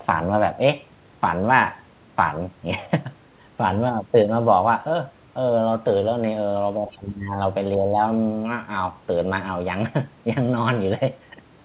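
Between 6.76 and 7.39 s the talker gets pushed down, roughly 15 dB at the worst point. That's speech suppressed in double talk. Both ends were talking together, and the echo canceller likely couldn't tell the near talker from the loudspeaker echo, so it ducked everything. A smaller version happens from 7.77 to 7.97 s, a dip of a few dB, short enough to register as a brief wobble.

Threaded through those dips you can catch the other side's voice leaking through. There's a faint scrap from 6.9 to 6.98 s, about 20 dB under the talker, and a slightly stronger one from 7.74 to 7.86 s, about 15 dB down. Both are short fragments. The far side's audio was played out of the device's speaker and likely wasn't fully cancelled before the mic sent it back. All of this sits inside a band that stops at 4 kHz, which fits a narrowband G.711-style call path.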